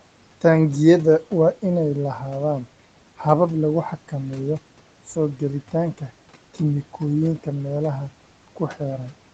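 Speech heard through a call link, with room noise about 24 dB below it and the top end stopping at 8 kHz. Between 8.48 and 8.8 s, parts of the speech turn faint and swallowed, dropping by about 11 dB for roughly a tenth of a second in all. This is speech cut by the noise suppressor, which mistook that stretch for background noise and turned it down.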